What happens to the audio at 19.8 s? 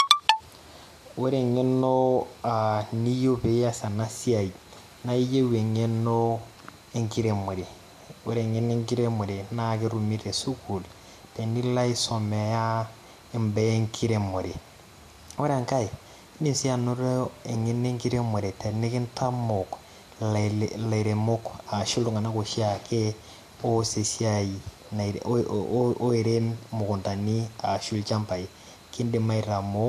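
Nothing goes wrong at 19.8 s; the speech carries on intact through that moment with no audible fault.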